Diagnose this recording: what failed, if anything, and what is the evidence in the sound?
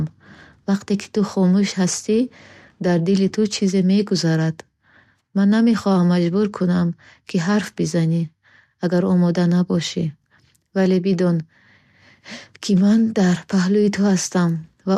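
Nothing in this speech recording points to a failure at any stage between capture and playback. No dropouts, clicks, distortion or level jumps can be heard anywhere in it.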